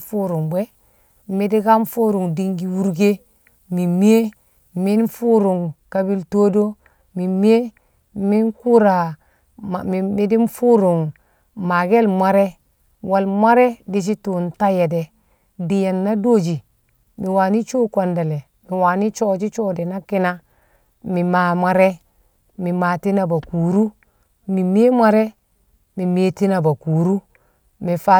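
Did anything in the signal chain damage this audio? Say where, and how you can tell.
Yes: pre-emphasis left on, from 0 to 5.08 s, in playback. The 50/15 µs treble boost went unreversed, lifting 10 kHz about 8 dB, so the speech sounds thin and sibilant, with a brighter spectrogram top.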